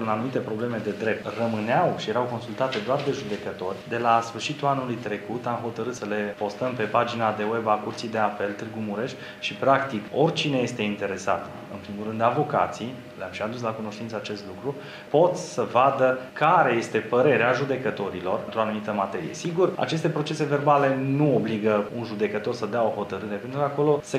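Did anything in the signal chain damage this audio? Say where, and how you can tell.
No, nothing in the chain left an audible mark: there are no dropouts, clicks, clipping, level jumps or timing glitches anywhere in the signal.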